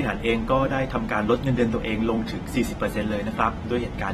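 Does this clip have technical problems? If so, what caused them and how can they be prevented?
Yes. AAC compression damage is plainly audible throughout the speech. Nothing is present above 13.8 kHz, so the top end sounds dull, and sibilants and sustained sounds carry a smeared, warbling texture. This is likely lossy AAC-LC coding at a low bitrate, consistent with roughly 36 kbps: the encoder drops high frequencies and coarsely quantises what remains. To prevent it, encode at a higher bitrate or keep a lossless copy.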